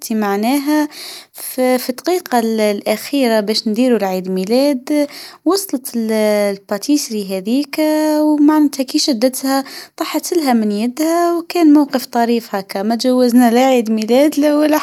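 A spoken recording with nothing technically wrong to be heard anywhere in it.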